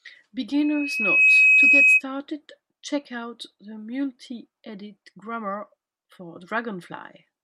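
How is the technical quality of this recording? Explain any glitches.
The recording has one clear fault, a loudspeaker feedback squeal. From 0.59 to 2.02 s a 2.6 kHz tone swells over roughly three quarters of a second to about 15 dB above the speech, as the microphone-to-speaker loop gain exceeds one at that frequency. A spectrogram shows a bright horizontal line; the waveform's envelope balloons.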